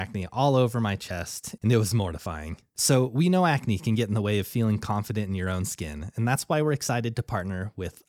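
Speech runs through the whole clip with sample clock jitter: the converter's timing wanders by something like a microsecond or two, so each sample lands slightly off its proper instant. The error follows how fast the waveform is changing, giving a fine roughness roughly 35 dB under the voice that swells on loud, bright syllables. Unlike a steady noise floor or hiss, it disappears entirely in the pauses between phrases.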